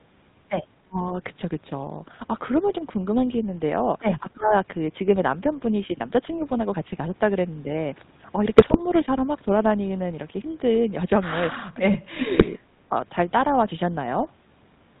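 Throughout, the speech carries the buzzy, gravelly roughness of the GSM full-rate codec, which fits a 13 kbps link and passes nothing above 4 kHz.

From 0.83 to 0.99 s, and again from 4.33 to 4.54 s, the voice dips sharply, by roughly 35 and 25 dB. This is likely speech suppressed in double talk, with the echo canceller ducking both sides at once.

From 8.58 to 8.81 s, GSM bit errors break the voice into squawks and gargling. Corrupted filter, pitch and gain values distort whole frames.

At 11.65 to 11.71 s a faint delayed copy appears, about 308 ms late and very quiet. This is likely echo leak from a loudspeaker end.

From 11.7 to 12.56 s the voice sinks again by up to about 20 dB in another double-talk suppression. Within it, from 12.34 to 12.45 s, further GSM bit errors add pops and garbling.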